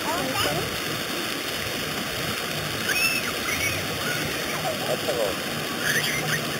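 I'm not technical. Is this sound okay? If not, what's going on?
No. Imaging from sample-and-hold upsampling runs through the whole clip. The sound was stretched from 8 kHz to 48 kHz by repeating each sample without smoothing, so mirrored copies starting around 4 kHz to 8 kHz add a bright, metallic fizz that follows the sound.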